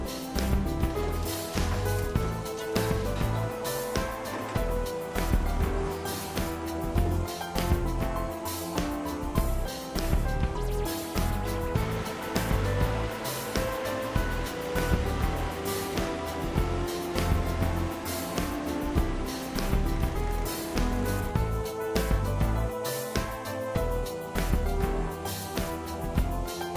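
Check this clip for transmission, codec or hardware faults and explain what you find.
No faults turn up anywhere in the clip.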